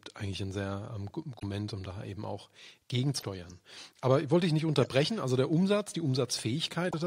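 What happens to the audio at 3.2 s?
From 3.16 to 3.23 s, damaged data in the compressed stream derails the decoder, which loses sync and searches for the next frame header, producing a brief chirp, squawk, click or short hole.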